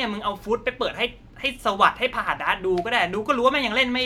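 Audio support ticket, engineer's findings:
No audible faults found.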